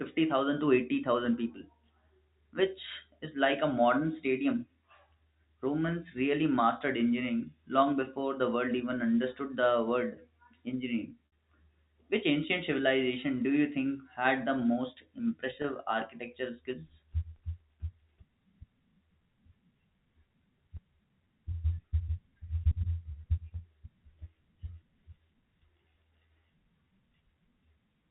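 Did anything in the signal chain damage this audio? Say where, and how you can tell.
Yes, at the network stage. At 11.27 to 11.32 s and again at 15.62 to 15.64 s the speech briefly holds on a slightly buzzy, frozen tone. This is packet loss with pitch repetition: the receiver looped the last pitch period to cover roughly 60 ms and 20 ms of missing audio, which fits three lost packets and then one. The G.711 telephone band around it stays clean.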